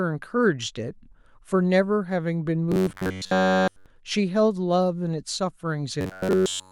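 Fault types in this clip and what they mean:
Robotic sound from repeated short buffers: Fresh audio was likely reaching the output too slowly, so playback kept looping the last chunk of roughly 10.7 ms while the real signal was dropped. Between 2.72 and 3.86 s, and again from 6.01 s to the end at 6.71 s, essentially all of the sound is that loop. This locks the speech onto a rigid, metallic buzz at 93.8 Hz that only loosely tracks the original.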